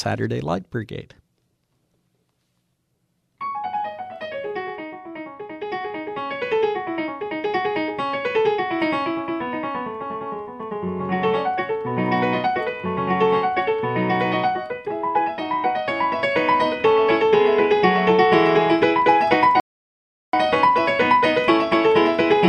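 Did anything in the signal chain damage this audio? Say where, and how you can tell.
Yes: a rebuffering stall at the playback stage, from 19.60 to 20.33 s. The audio drops to silence for about 0.73 s, then picks up exactly where it left off with nothing skipped. That gap in time, with no missing material, shows the player drained its buffer of downloaded audio and waited for more data before continuing. The delivery path was starved, not the recording, so the stall adds time without losing any content.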